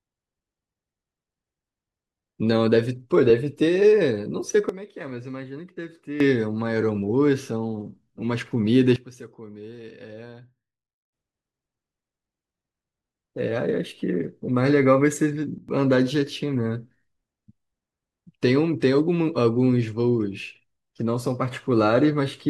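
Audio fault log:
4.69–6.20 s, sudden gain jump: the level was likely switched without a ramp, so the speech and the background noise drop together by about 12 dB in a single step and come back just as abruptly.
8.96–11.13 s, sudden gain jump: a likely unramped gain change pulls speech and noise floor down together by about 17 dB for two seconds.
15.58–15.69 s, sudden gain jump: a brief dip of about 12 dB, likely the same unsmoothed gain step, lasts about a tenth of a second.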